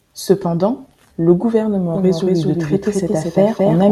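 A doubled audio track begins abruptly at 1.95 s and runs to the end of the clip. From that point a second, full-band copy of the speech follows roughly a fifth of a second behind the first, at about the same loudness. The copy has no decay or room colouring. It sounds like a clean, detached echo of every syllable, most likely from the signal being captured again through a slower path.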